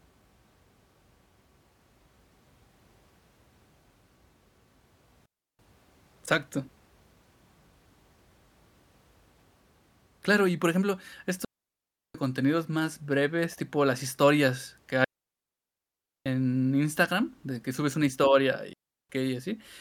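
At 5.26 s the speech drops into a clean hole for about a third of a second. It's a digital wireless dropout: the radio link lost too much data, so the receiver muted with a very fast fade, with no hiss or crackle around it. The same thing happens again at 11.45 s for 0.7 s, between "y por ejemplo" and "contenidos más breves tipo". It happens at 15.04 s for 1.22 s after "tipo las historias que", and at 18.73 s for 0.36 s after "que subes una historia".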